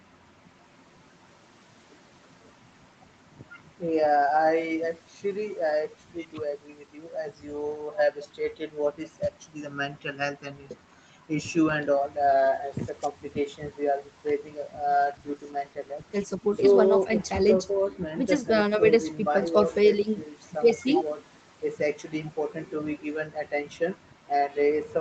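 From 14.92 s to 17.69 s there is a call bitrate drop. The call's bandwidth estimate fell, and the Opus encoder had to cut its rate from 32 kbps to 17 kbps, staying at that floor for about 2.7 s. With roughly half the bits, the speech is coded more coarsely. It turns rougher and watery against the 8 kHz-limited call sound around it, then clears once the rate recovers.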